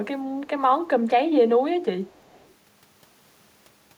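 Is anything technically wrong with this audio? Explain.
Yes. From 2.04 to 2.49 s there is an echo leak: the far end was likely playing the call through a loudspeaker, and its echo canceller failed to strip out everything its microphone picked up, so part of this speech was sent back. The result is a faint delayed copy trailing the speech by about 359 ms, sitting far below the main signal, audible as a ghost behind it for under half a second.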